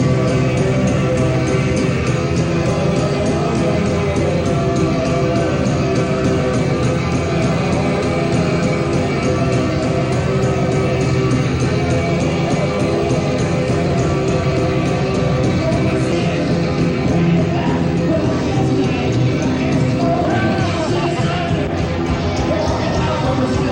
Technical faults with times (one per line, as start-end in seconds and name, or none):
16.12 CD skip